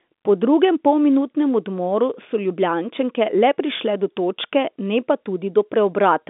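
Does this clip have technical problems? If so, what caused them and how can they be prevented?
No, nothing stood out as a technical problem on listening to this speech clip.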